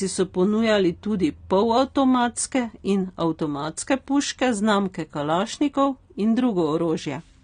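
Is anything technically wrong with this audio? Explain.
Yes. Throughout, the speech sounds dull and warbly, with nothing above 9.7 kHz; this is likely AAC compression, its band-limiting and coarse quantisation fitting a bitrate around 32 kbps.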